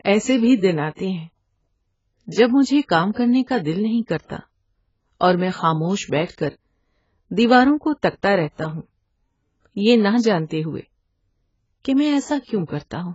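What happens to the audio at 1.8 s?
At 1.8 s the speech sounds dull and smeared, with fizzy, warbling sibilants. Nothing sounds above 7.6 kHz. This runs through the whole clip. The likely cause is heavy AAC compression near 16 kbps, which drops high bands and coarsely quantises the rest.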